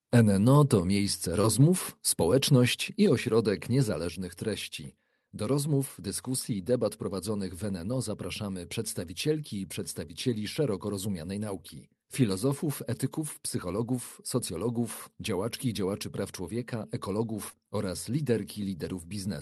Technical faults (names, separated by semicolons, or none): short concealed packet loss; microphone volume stepped down